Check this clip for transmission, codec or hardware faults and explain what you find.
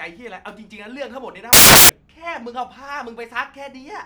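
One fault is present: samples built from the wrong bytes, from 1.53 to 1.89 s. The reader assembled each sample's bytes misaligned or in swapped order, so rapidly changing low bits became the dominant part of every value. The speech is replaced by loud, harsh broadband noise across that span.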